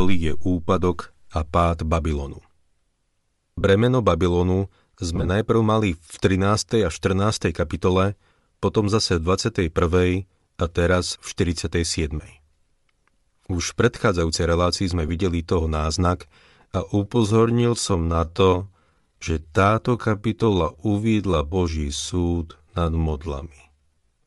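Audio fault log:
throughout: Bluetooth LC3 compression, likely the cause of the grainy, breathy edge on the speech. The upper spectrum is thinned and partly refilled with noise in 10 ms transform frames, which fits a bitrate near 48 kbps; the codec damage is plainly audible across the clip.
3.61–3.64, 5.16–5.29, 15.08: lost LE Audio frames. The decoder covers each gap by repeating the last spectrum with randomised signs, so the speech smears into brief noisy blurs: 30 ms at 3.61, scattered 60 ms of losses in runs of about 20 ms at 5.16, and 10 ms at 15.08.
16.80 to the end: time-stretched section, likely from software fitting the audio to a length. From here the speech runs at about 0.7 times its pace while pitch holds. Short pieces are repeated to fill the time, so the speech drags.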